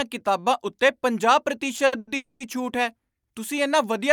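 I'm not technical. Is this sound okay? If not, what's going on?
No. Right after "ਕਿਤਾਬਾਂ ਉੱਤੇ ਪੰਜਾਹ", from 1.76 to 2.08 s, the audio data kept arriving late, causing repeated stalls (stutter). Four times the receiver stretched the last sound to cover the wait, the longest for 90 ms. About half that stretch is filler, so the speech drags and stutters, though nothing is lost.

Then from 2.16 to 2.41 s there is a call audio freeze, likely from data being held up on the way. The last sound is held as a smeared, fading buzz for 240 ms, with no silence, before "ਛੂਟ ਹੈ" resumes where it stopped. Nothing is missing, but the speech runs a quarter second late afterward.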